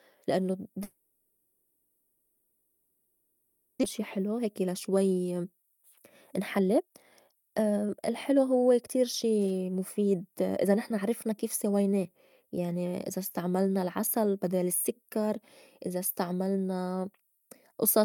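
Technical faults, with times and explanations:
0.83–3.85 s, long network dropout: the sound smears into a fading buzz and hiss for three seconds with no gap of true silence. About 1.6 s of audio is lost, likely from a long packet outage rather than a brief glitch.
4.01–11.81 s, jitter buffer speed-up: the audio runs at 117% speed and sounds hurried but keeps its pitch, shedding roughly 1.5 s of built-up delay. Tiny pitch-period cuts, not resampling, explain why there is no chipmunk shift.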